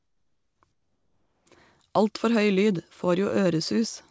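From 0.00 to 0.62 s and again from 0.72 to 1.46 s, the real background gives way to comfort noise, a smooth, featureless hiss about 6 dB and then about 5 dB quieter, likely because discontinuous transmission paused sending while the synthetic fill stood in.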